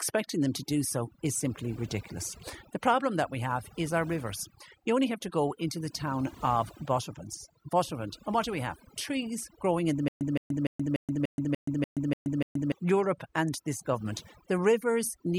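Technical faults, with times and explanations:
Throughout: overdone noise removal. The background drops, with small twinkling specks left behind. Frequency bands near the noise floor are pushed far down, and quiet parts of the speech vanish with them.
10.08 to 12.72 s: stutter with silent gaps. Right after "growing in the", a 167 ms burst repeats nine times, each followed by 126 ms of digital silence, so it returns every 293 ms. A stalled stream replaying its last fragment is the likely cause. The speech that should fill this span is lost.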